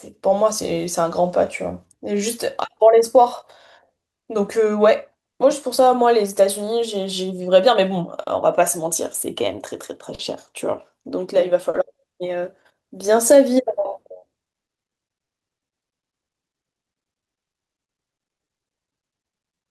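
A speech recording suffers from clock drift between sender and receiver: the sending device's clock runs roughly 3 percent slow, so the receiver's jitter buffer keeps draining rather than holding steady, and the timing never settles. To stay in step, the receiver makes repeated timing corrections, repeating short pieces and playing at about 97 percent speed from 0.18 to 10.92 s and again from 12.82 to 19.56 s. That adds around a third of a second, then a fifth, leaving an uneven tempo with slight hiccups. Three times the buffer runs dry, causing a short stall from a late packet at 8.23–8.29, 10.15–10.21 and 11.70–11.76 s. Each time the last sound is stretched for 40 ms until the packet arrives, then continues with nothing lost, heard as a brief hold with a slight buzz or dip.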